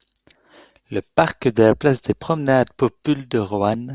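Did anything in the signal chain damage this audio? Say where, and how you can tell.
No, nothing in the chain audibly damaged this speech recording, so there is no stage to point to.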